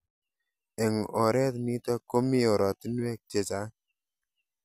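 No technical faults can be heard anywhere in the speech.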